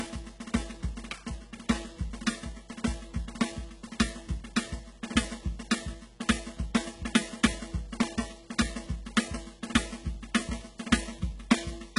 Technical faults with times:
0.00-11.98 mains buzz
0.00-11.98 HE-AAC compression

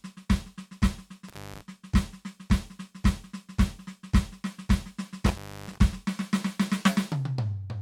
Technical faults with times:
1.28-1.62 intermittent contact
5.26-5.78 intermittent contact

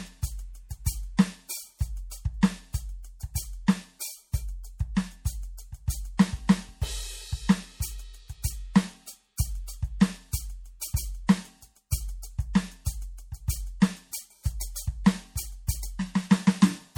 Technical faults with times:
0.00-16.98 MP3 compression

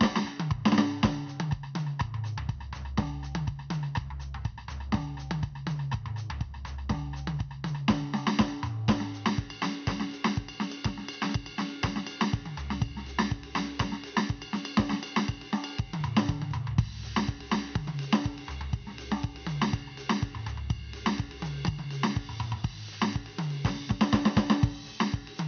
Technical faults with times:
none

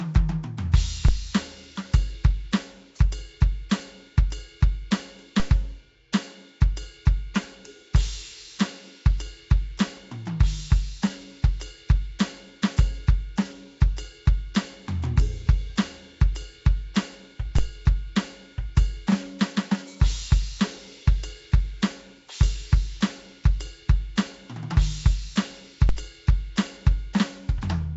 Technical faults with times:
0.00-27.96 Nellymoser compression
1.08 DC step
5.40 DC step
6.12 pre-echo
17.58 DC step
25.89 DC step

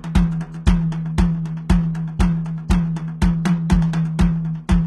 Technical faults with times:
0.00-4.87 HE-AAC compression

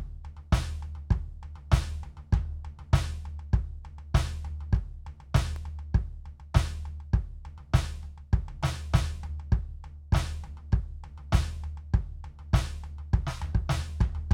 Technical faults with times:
4.77-5.56 CD scratch ticks

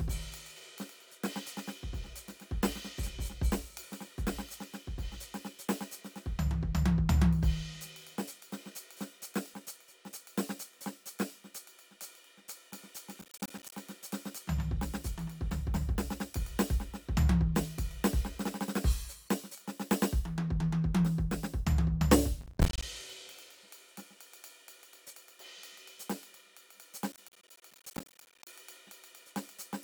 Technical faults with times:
13.21-13.76 processor overload crackle
22.41-22.83 processor overload crackle
27.12-28.53 processor overload crackle

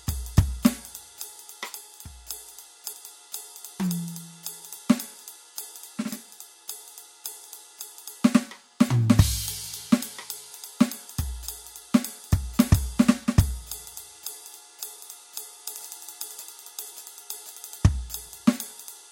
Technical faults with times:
17.13 compressed frames skipped

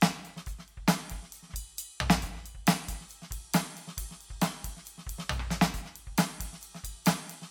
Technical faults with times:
0.00-7.50 generation loss

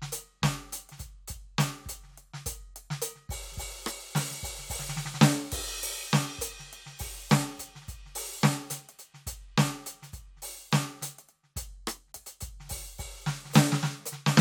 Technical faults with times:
none

